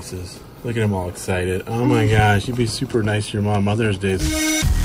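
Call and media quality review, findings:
Abrupt jump forward in the sound at 4.19–4.24 s, with a small blip at the join; a second or more of programme missing. Likely stream segment skipped: one segment failed to load, player resumed with the next.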